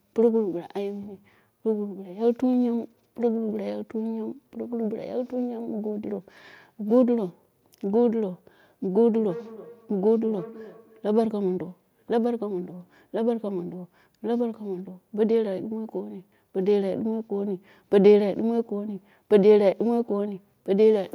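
A speech clip where, from 9.16 to 11.09 s, each word returns roughly every 0.3 s, thinner and ringing, about 17 dB down: feedback echo between two devices sharing the call in one room.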